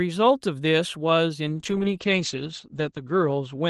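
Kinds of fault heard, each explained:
Call bitrate drop: From 1.49 s the call's bandwidth estimate falls and the Opus encoder is made to spend far fewer bits, which fits a fall from about 40 kbps to around 11 kbps. The speech is then coded more coarsely and turns rough and watery. The upper band is also trimmed, with the cut-off dropping from 12 kHz to 8 kHz, so the voice sounds muffled. The lowest rate holds for about 1.58 s and does not recover before the end of the clip.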